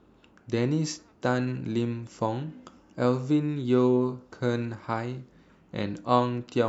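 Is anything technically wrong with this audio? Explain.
No, there's nothing technically wrong here; it's just a speech recording with no faults to point out.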